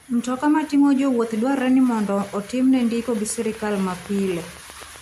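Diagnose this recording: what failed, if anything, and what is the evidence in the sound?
A repeating pulse entered the signal path, likely interference coupling into the analogue wiring or interface. The result is a train of clicks from 3.18 to 4.97 s, right after "ni mondo otimne ndiko": about fifteen evenly spaced ticks at 7.9 per second, peaking roughly level with the speech.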